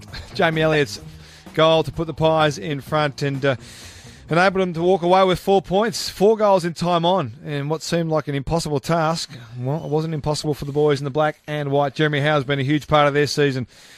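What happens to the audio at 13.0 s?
At 12.95 s a corrupt frame is decoded. Flipped bits in a single compressed frame were played anyway, so misread gains or codes put energy at the wrong frequencies for about one frame's length, heard as a chirp, squeak, blip or noise burst. A lost frame would instead leave a gap or a smoothed-over patch.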